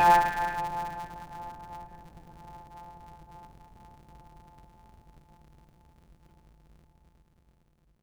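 A block size mismatch (truncated) runs through the whole of this music clip. One stage writes longer blocks than the next one reads, so the tail of every block is discarded before playback. Each cut joins the audio abruptly, and these joins repeat at about 172 Hz, which fits 256-sample reads and is heard as a steady buzz under the music. Because audio is lost at every join, the music plays 1.88 times faster than it should, yet keeps its timbre.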